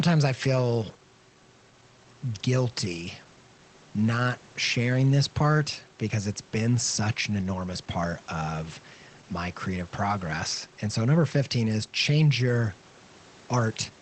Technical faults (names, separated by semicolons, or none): none